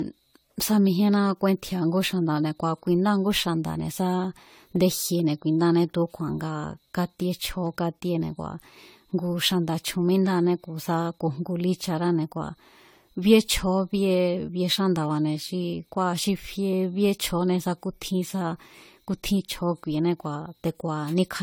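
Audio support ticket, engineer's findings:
Generation loss, throughout the speech. Swirly, hollow, smeared tone; consonant attacks blurred. Likely repeated lossy re-encoding, consistent with around five AAC-LC passes near 64 kbit/s. Spectrogram: patchy holes and smeared transients, bandwidth still reaching about 20.1 kHz.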